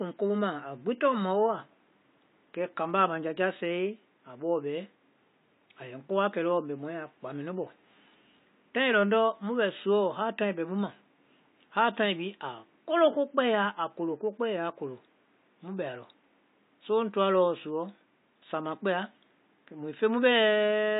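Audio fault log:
Throughout, AAC compression: the speech sounds plainly dull and smeared, with the top end cut away and a watery, fizzy texture on sibilants and held vowels, while the room noise sits about 43 dB below the speech. This is likely lossy AAC-LC coding at a low rate, consistent with roughly 32 kbps. The encoder lowers its cut-off, leaves gaps in the spectrum, and quantises coarsely, so detail blurs and hiss-like sounds warble.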